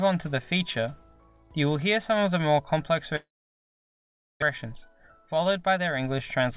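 From 3.16 to 4.44 s, a long network dropout is the likely cause: audio stopped arriving, and the receiver stretched the last sound into a brief fading buzz before about 1.13 s of silence. The sound then resumes with about 1.04 s missing, and the delay shifts by about a fifth of a second.

From 4.66 to 6.48 s, a jitter buffer speed-up follows: with too much audio queued, the receiver repeatedly cut short pitch-period pieces, well under a fifth of a second in total. Playback runs at about 108% speed, hurried but unchanged in pitch, still band-limited to 4 kHz by the G.711 mu-law call path.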